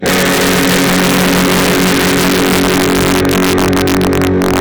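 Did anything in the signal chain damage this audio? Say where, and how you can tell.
Yes. Integer overflow at sample-format conversion: the signal is driven about 5 dB over full scale, so around 2% of samples wrap to the opposite sign, cracking violently throughout.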